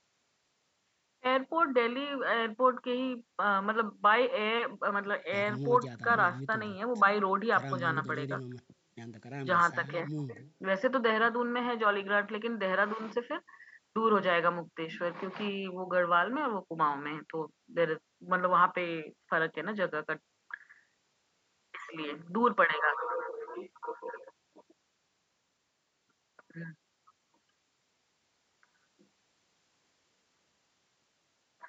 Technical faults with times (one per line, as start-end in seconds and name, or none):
none